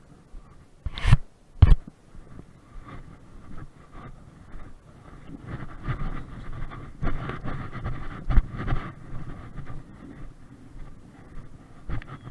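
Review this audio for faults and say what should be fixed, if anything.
Nothing here needs fixing; no faults were heard.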